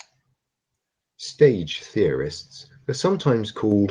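A speech recording with no audible technical faults.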